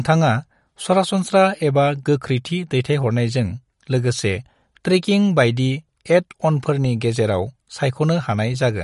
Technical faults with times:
0.00-8.83 MP3 compression

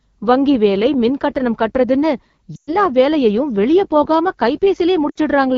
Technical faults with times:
0.00-5.57 AMR wideband (HD Voice) codec
2.56-2.76 lost AMR speech frames
5.10-5.18 lost AMR speech frames

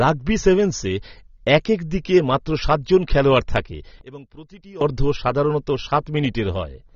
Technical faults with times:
0.00-6.96 AAC compression
4.01-4.81 one channel inverted

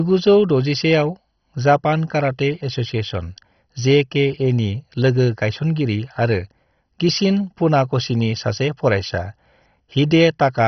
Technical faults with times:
0.00-10.67 MP2 compression

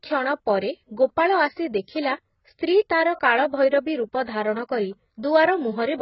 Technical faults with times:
0.00-6.01 AAC compression

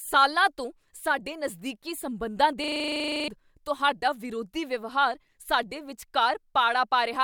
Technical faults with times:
2.64-3.28 system hang loop

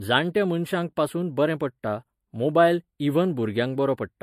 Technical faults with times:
0.00-4.22 channel delay (comb filtering)
0.00-4.22 generation loss

